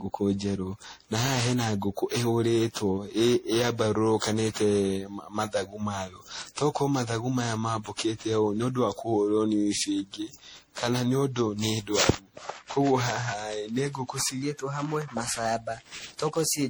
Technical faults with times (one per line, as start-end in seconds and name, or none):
0.00-16.69 generation loss
14.42-16.69 section at the wrong speed